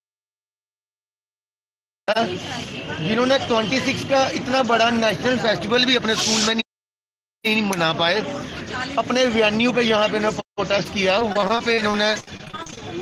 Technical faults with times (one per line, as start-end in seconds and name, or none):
11.19-12.82 repeated packet loss (robotic sound)